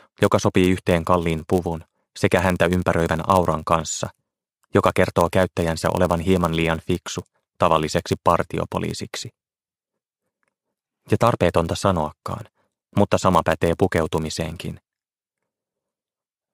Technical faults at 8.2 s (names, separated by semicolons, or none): filter restarted on every block